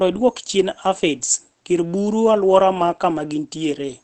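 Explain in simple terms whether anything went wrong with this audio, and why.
The speech sounds muffled and hoarse from start to finish. Nothing above 8.5 kHz comes through, so crisp sounds lose their edge. The likely cause is Opus compression, pushed into its speech mode, which gives up detail to save space.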